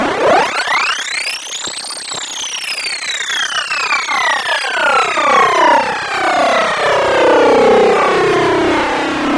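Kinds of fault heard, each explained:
Nothing stood out on listening to this audio.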